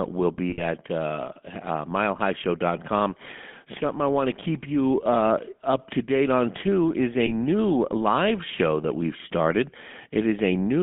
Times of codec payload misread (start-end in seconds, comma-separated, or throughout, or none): none